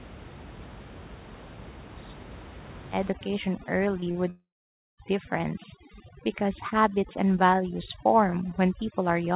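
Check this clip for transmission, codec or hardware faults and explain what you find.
Three faults stand out in this speech: heavy-handed noise suppression over the last two-thirds, a cluster of brief concealed gaps, and one longer break in the stream.

Overdone noise removal runs from 3.11 s to the end. The suppressor is set so strong that frequency bands near its noise estimate are pushed almost to nothing, taking quiet parts of speech with them. The background drops and breaks up into twinkling specks.

Short concealed packet loss occurs at 4.00–4.04 s, 4.04–4.08 s and 4.12–4.16 s, each about 20 ms missing. The receiver patched each hole by extending the preceding sound and then blending back, so these come through as quick smears or wobbles in that stretch.

A long network dropout, likely the cause of the break from 4.30 to 5.00 s, leaves about 680 ms missing. The last sound is stretched into a fading buzz or hiss, then roughly half a second of silence follows before speech resumes with that portion gone.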